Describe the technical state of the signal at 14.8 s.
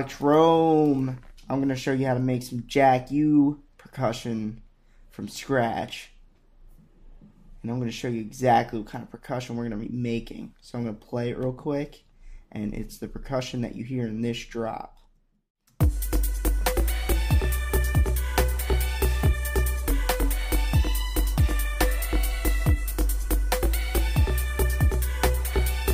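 At 14.8 s the signal is intact, with no dropout, distortion, glitch or other technical fault present at that point.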